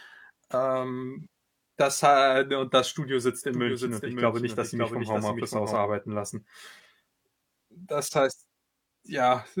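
Around 1.20 to 1.27 s, just before "das ha und das", there's AAC frame loss with concealment. About 43 ms went missing, which fits a single lost frame. The decoder patched the gap from the previous spectrum, so you hear a brief smeared, noisy blur.

From 3.54 to 5.76 s, right after "sitzt in", the speech gets a doubled audio track. A second full-band copy trails roughly half a second behind, a few dB quieter, with no reverb tail. It cuts in and out abruptly, likely from a second, slower capture path.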